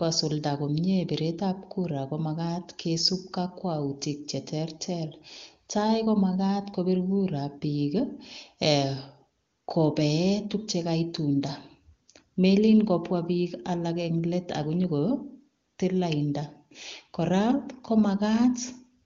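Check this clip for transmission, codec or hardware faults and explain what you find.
Nothing here points to a transmission, codec or hardware problem; the speech comes over an AMR wideband (HD Voice) link at 23.85 kbit/s, the codec's top rate, where any coding damage is faint at most.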